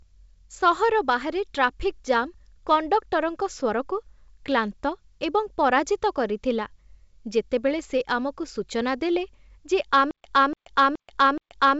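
Speech coded over G.722 wideband telephony, its band reaching toward 7 kHz, breaks into a stutter with silent gaps from 10.11 s to the end. A 291 ms fragment replays four times, each followed by 132 ms of digital silence, repeating every 423 ms. It is likely a stalled stream re-serving its last buffer, and the dead silence between repeats sets it apart from a seamless loop.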